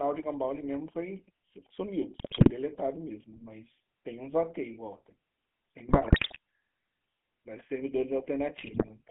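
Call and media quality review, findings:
GSM full-rate codec, whole clip. Buzzy, gravelly roughness on all the speech, band sitting at about 150 Hz to 3.4 kHz. Sounds like 13 kbps full rate: vocal-tract filter fed by sparse, evenly spaced pulses, only every third excitation sample kept, hence the buzz.

GSM bit errors, 2.14–2.51 s, 5.88–6.38 s, 8.58–8.91 s. Squawks, pops and gargling in bursts. Flipped bits from a weak radio link reaching the decoder, corrupting filter, pitch and gain values so frames get warped spectra or level spikes.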